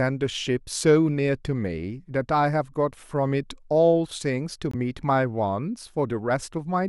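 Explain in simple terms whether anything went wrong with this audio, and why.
At 4.71 to 4.75 s the speech cuts out for a split second, a gap of about 21 ms, then picks up further along as if it had kept playing. This is likely a Bluetooth dropout, consistent with one packet of audio arriving too late and being discarded.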